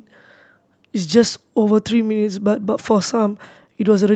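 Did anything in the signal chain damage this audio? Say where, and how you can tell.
No, nothing in this speech recording stood out as damage from any stage of the signal chain when listening to it.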